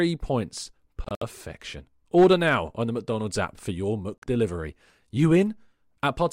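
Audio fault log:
1.04–1.23 s, Bluetooth dropout: sound breaks into silent gaps totalling 107 ms, longest 64 ms, likely late wireless packets discarded before playback.
4.19–4.24 s, Bluetooth dropout: 43 ms of sound lost, then sound resumes as if it had played on, likely a short burst of dropped wireless packets.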